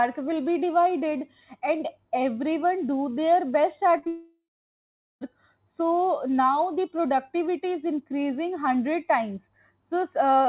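From 3.98 to 4.05 s and again from 4.05 to 4.08 s the sound smears and wobbles briefly. This is short concealed packet loss: about 40 ms and then 20 ms of audio arrived too late, so the receiver filled the gaps by extending the preceding sound. From 4.08 to 5.23 s that smear turns into a fading buzz or hiss and then about 0.75 s of silence before the audio returns, with roughly 1.1 s of it gone. The likely cause is a long network dropout, where the receiver kept stretching the last sound until it gave up. Throughout, the narrow band with nothing above 4 kHz fits a 64 kbps G.711 mu-law call path.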